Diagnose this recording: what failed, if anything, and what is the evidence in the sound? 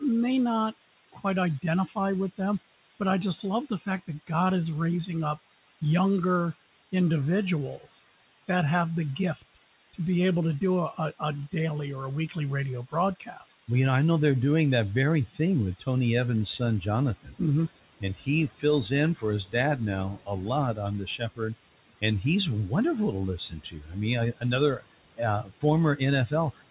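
Low bit depth with dither runs through the whole clip, at the sample-format conversion stage. A constant, even hiss sits only about 15 dB below the speech and does not change with level. There is no harsh distortion on quiet passages. This fits a 5-bit word length with dither added before rounding, which turns the rounding error into steady white noise instead of signal-dependent grit. The hiss sits inside a band that stops at 4 kHz, consistent with a G.711 mu-law call path at 64 kbps.

Noise suppressor artifacts are also present throughout, from the call-processing stage. The background hiss dips in the gaps and swells back under the speech. This is the sound of a suppressor deciding frame by frame and band by band what counts as steady noise and attenuating it. Strong dithered hiss gives it plenty to chew on.

Speech cut by the noise suppressor, in the same stage, occurs in three spans. 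The first runs from 0.0 to 4.3 s, ending just before "is raising". The second runs from 5.36 to 13.69 s, right after "is raising". The third runs from 15.26 to 26.7 s, after "they're doing that very". Soft consonants, word endings and quieter stretches sound swallowed, dropping by up to about 17 to 18 dB at the deepest. That adds up to roughly a second and a half in the first span and about three seconds in the second. The suppressor mistook low-level speech for the noise floor and turned it down with the background.

Noise suppressor catching up, also call processing, occurs from 16.15 to 16.42 s. The room noise jumps by about 18 dB at roughly 16 s, ending up about 19 dB below the speech. For 270 ms that new noise comes through with little reduction. It then sinks by about 13 dB as the suppressor's noise estimate adapts to the higher floor. The lag is the estimator tracking the change, not an instant response.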